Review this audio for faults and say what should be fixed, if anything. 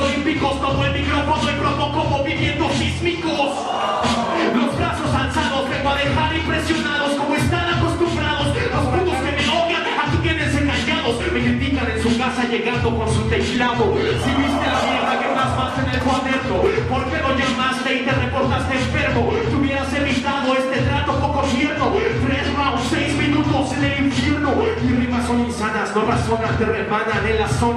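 From 13.55 to 15.18 s the sound turns rough, watery and dull, then clears again. This is a call bitrate drop: the bandwidth estimate collapsed and the encoder coded far more coarsely for about 1.6 s, consistent with a fall from roughly 64 to 16 kbps. To prevent it, stabilise the network path or tune bandwidth estimation so that brief congestion doesn't force such a steep cut.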